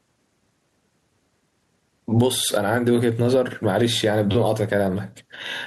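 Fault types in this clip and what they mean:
gain pumping: Throughout the speech, the level is pulled down on each loud sound, swinging by about 20 dB, likely because the input gain is set far too high and a fast limiter or compressor clamps it on each peak. On a waveform, speech peaks sit flattened at a near-constant height, with loud and soft parts closer in level.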